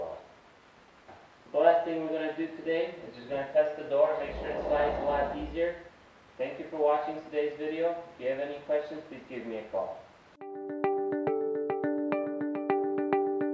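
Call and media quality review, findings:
No audible faults found.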